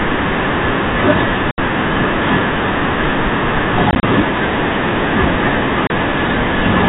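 At 1.51 to 1.58 s, 3.91 to 4.03 s and 5.87 to 5.90 s the speech drops out. This is packet loss filled with silence. Lost chunks became dead gaps with hard edges. The middle loss is scattered, longest hole 30 ms. Gap lengths fit 10 ms packets, over telephone-band G.711 audio.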